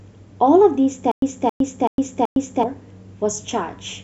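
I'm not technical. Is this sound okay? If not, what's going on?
No. Playback likely stalled between 1.12 and 2.63 s, replaying its last fragment at each retry and then going quiet. That is a stutter with silent gaps: the same 272 ms burst repeats four times, each followed by 108 ms of dead silence, and the speech in between is lost.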